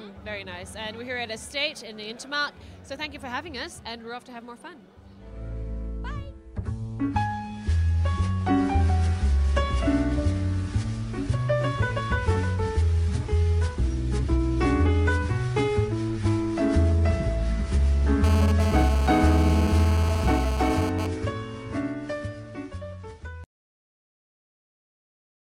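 From 18.24 to 21.07 s a hard, raspy buzz sits on top of the sound, pitched at about 217 Hz (216.7 Hz) and rich in harmonics, at about 8 dB below the signal and unrelated to it. This is GSM phone buzz: a nearby 2G phone transmits in bursts about 217 times a second, and the audio circuitry rectifies those radio pulses into audible noise. Its appearance for under three seconds fits the phone sending data.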